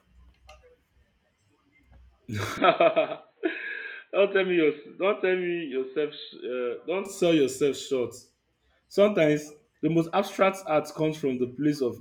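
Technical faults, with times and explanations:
2.58 to 7.05 s, input switched to a poorer device: sound abruptly cuts off above 4.2 kHz, drops about 5 dB in level and gains faint background noise just before "sell yourself short", likely from a device change, then clears.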